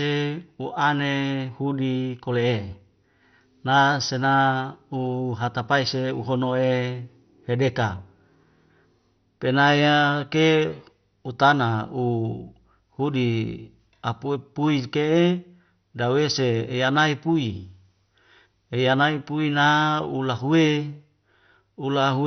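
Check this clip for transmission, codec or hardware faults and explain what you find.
The clip has a codec fault that runs throughout. The speech was likely squeezed through MP2 compression at a very low bitrate, which fits something near 48 kbps. Starved sub-bands are switched off, leaving nothing above about 6.1 kHz, and the remaining bands are coarsely quantised, so the speech sounds dull, with a heavy gurgling, granular roughness.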